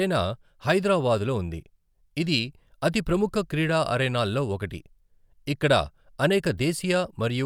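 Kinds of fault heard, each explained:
No technical fault can be heard anywhere in this speech recording. There is nothing here to list or explain.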